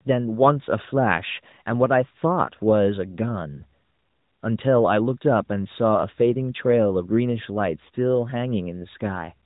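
Speech, with no technical fault anywhere in the recording. It comes through the AMR narrowband mobile codec at a rate that fits 12.2 kbps, so everything above 4 kHz is gone and the sound has the slightly processed, telephone-band quality of that path, with only light codec colouring.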